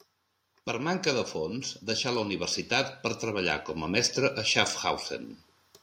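From about 0.48 s the level starts creeping up, and it keeps climbing until around 4.45 s, ending roughly 6 dB louder. That's automatic gain rising: the AGC decided the input was too quiet and slowly wound its gain up over nearly four seconds. You hear the speech swell, and the room noise underneath comes up right along with it, which is the giveaway that it's gain riding rather than the talker getting louder.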